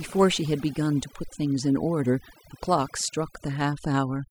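Throughout, overdone noise removal pulls frequency bands near the noise estimate far down, leaving a lowered background that breaks up into twinkling specks.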